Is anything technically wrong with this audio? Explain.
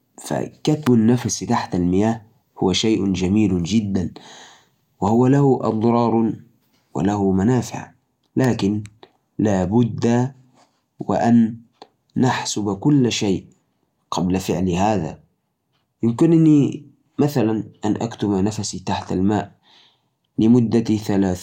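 Yes. Sharp snaps cut through the speech at 0.86 s and 8.44 s, peaking around -5 and -10 dBFS, most likely an electrical switching spike from a nearby switch arcing into the line.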